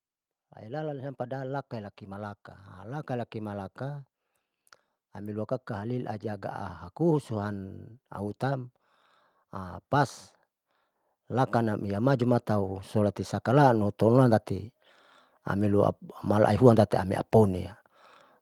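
From 0.36 s to 4.09 s the level climbs by about 6 dB, a case of automatic gain rising: the gain control judged the input too quiet and turned itself up slowly. A second rise begins at 5.22 s and continues to the end. What separates this from a speaker simply getting louder is that the room noise swells along with the speech, and the rise is a smooth ramp over seconds rather than a sudden step.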